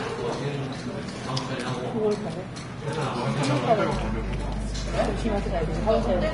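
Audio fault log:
throughout: Vorbis compression. The whole clip sounds hissy and grainy, with nothing above about 10.6 kHz, tones roughened and attacks smeared. The damage fits low-bitrate Vorbis at around 32 kbps, which likely cut the treble and quantised the remaining upper detail so coarsely it turned into noise.
3.91 to 6.34 s: mains hum. A steady low tone at 50 Hz joins the sound and stays to the end, only about 5 dB below the signal itself. It comes from power-line current leaking into the signal, as through a ground loop or a nearby transformer.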